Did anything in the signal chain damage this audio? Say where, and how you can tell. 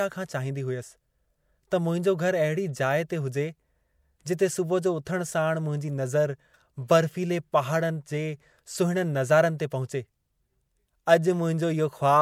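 Yes, the codec stage left pre-echo in this speech at 5.05 s and 9.58 s. Just before each sharp onset there's a short hiss lasting about 15 ms, and the attack itself sounds smeared. A transform codec spreads its quantisation noise across the whole block, so the noise meant for the loud onset also fills the quiet moment ahead of it. On a spectrogram, a thin broadband smear appears before each onset; the waveform shows low noise where there should be near-silence.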